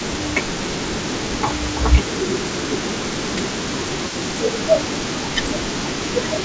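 Speech, with a faint delayed copy of the voice trailing it by about 0.32 s throughout the clip, roughly 15 dB under the direct sound. This echo leak most likely comes from a far-end loudspeaker whose echo canceller let part of the pickup return. The voice also dips and thins in patches from 0.11 to 2.41 s (down roughly 10 dB, about a second in total), from 2.81 to 3.57 s (around 15 dB, about half a second), and from 4.37 s to the end (around 15 dB). This is speech suppressed in double talk, likely the canceller turning down its own talker along with the loudspeaker echo while the two overlapped. The call path is band-limited, with nothing above 8 kHz, which fits G.722 at 64 kbps.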